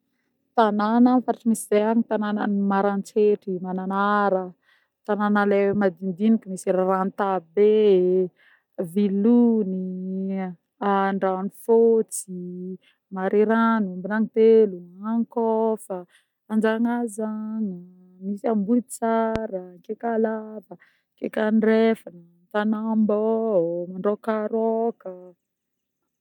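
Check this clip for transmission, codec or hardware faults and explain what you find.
One fault stands out, a loud pop. It runs from 19.36 to 19.38 s as a single sharp pulse, about 15 dB above the speech. It is likely a sudden voltage step from a plug, switch or static discharge. The speech carries on beneath it.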